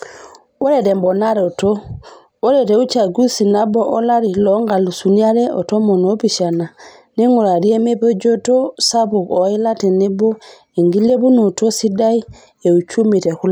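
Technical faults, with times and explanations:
No technical faults are audible in this speech recording.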